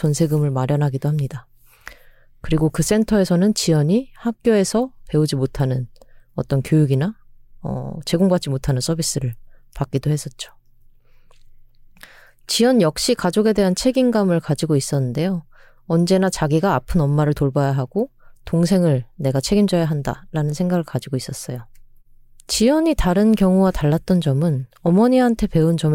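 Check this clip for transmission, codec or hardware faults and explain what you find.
Nothing stood out on listening to this speech recording.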